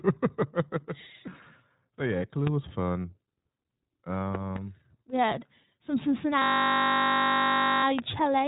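Throughout, the speech carries iLBC codec damage: nothing passes above about 3.8 kHz, and each 20 ms frame is coded independently at 15.2 kbps, which makes the speech plainly rough and slightly synthetic, with a dull, band-limited telephone quality.

Loud pops occur at 2.47 to 2.49 s, just before "was fun"; as a pair from 4.35 to 4.58 s, just before "we had some"; and at 7.99 to 8.01 s. Each is a sharp transient peaking about 15 dB above the speech, which continues underneath, most likely from a voltage step such as a switch, static discharge or driver glitch.

From 6.42 to 7.84 s, a system hang loop repeats one 20 ms slice of audio 71 times, just after "we had some". The hardware kept replaying its buffer while the system stalled, producing a steady 50 Hz buzz in place of the speech.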